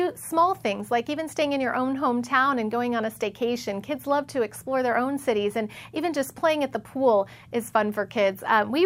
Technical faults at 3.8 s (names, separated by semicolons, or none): none